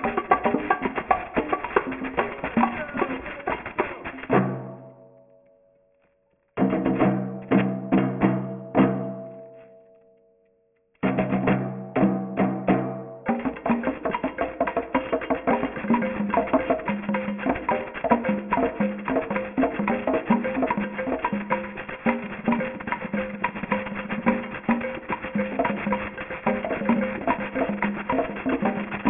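Throughout, the sample rate was cut without an anti-alias filter, which fits a drop to about 6 kHz, causing aliasing: content above 3 kHz folds back as fairly loud gritty, metallic false tones.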